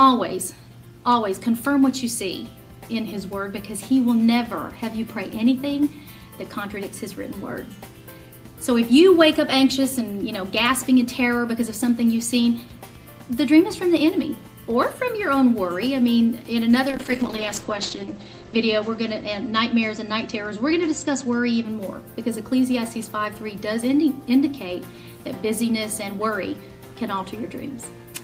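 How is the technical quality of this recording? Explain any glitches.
There is one glitch, a call bitrate drop from 16.9 s to 21.71 s. The encoder was starved of bits, which fits a fall from about 32 to 9 kbps, so bandwidth shrinks from 20 kHz to 8 kHz. The sound turns muffled and watery, unlike a plain filter, which would stay clean, and recovers afterwards.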